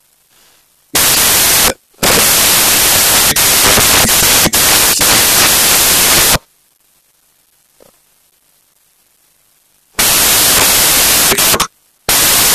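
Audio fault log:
Throughout: samples built from the wrong bytes. The speech is swamped by loud, broadband hiss across the whole clip. The bytes of each sample have been joined in the wrong order or at the wrong offset, so the rapidly varying low bits now make up the bulk of each value. On a waveform this shows as a dense block of noise. A spectrogram shows flat noise filling every band.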